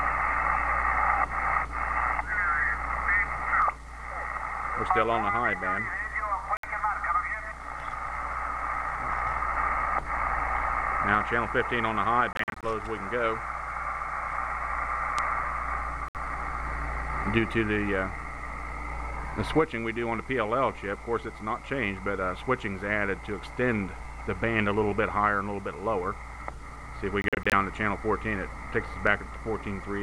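Short silent gaps cut the audio at 6.57, 12.33–12.64, 16.08 and 27.22–27.53 s before it resumes further along, likely Bluetooth dropout from late packets discarded.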